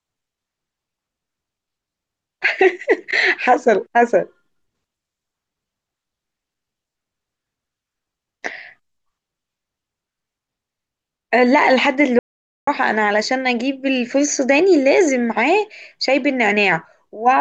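At 12.19 s the speech cuts to dead silence, no room tone, until 12.67 s: an audio dropout to silence, likely a briefly lost input.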